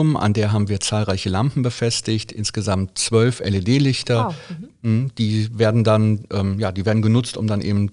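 No technical faults are audible.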